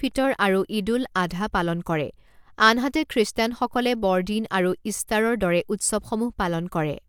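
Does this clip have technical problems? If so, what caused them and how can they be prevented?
No, no faults are audible.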